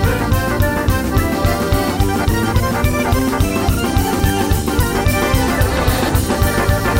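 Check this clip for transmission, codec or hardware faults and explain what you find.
No transmission, codec or hardware faults found.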